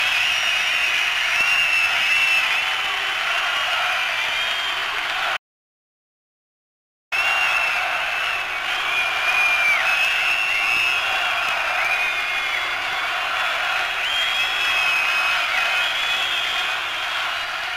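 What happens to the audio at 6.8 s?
At 6.8 s the audio is inside an audio dropout to silence that runs from 5.37 s to 7.12 s, about 1.75 s in all. The sound cuts off mid-flow and the gap is silent, with no room tone or background underneath, before the audio resumes just as abruptly. That points to the input likely being lost for a moment while the recorder kept writing silence, so whatever happened during that stretch is gone.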